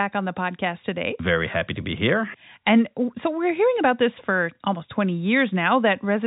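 No technical faults are present in the speech, which carries the narrow band of G.711 A-law telephone coding with nothing above 3.8 kHz.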